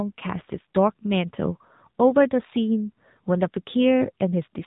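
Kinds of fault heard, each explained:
AMR narrowband mobile codec, throughout: the speech has gone through the 2G/3G mobile speech coder, which rebuilds every 20 ms frame from a vocal-tract model driven by a few pulses instead of keeping the waveform itself. Nothing passes above 3.8 kHz, which fits 8 kHz sampling, so sibilants and breathy detail are missing. The damage is plainly audible as a buzzy, synthetic edge on the voice, pointing to one of the codec's lower modes, around 7.4 kbps.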